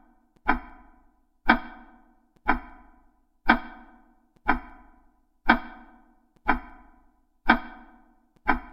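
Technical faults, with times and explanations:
No technical faults are present.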